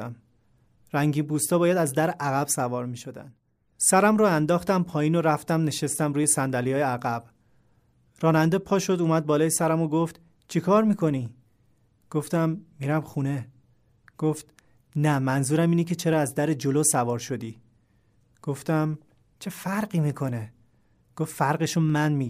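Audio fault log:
0.48–21.90 s, clock drift buffer slips: a click recurs every 0.82 s, around 30 times, while the speech plays. This is likely two independent clocks disagreeing by around 200 ppm, so the buffer periodically drops or repeats a few samples.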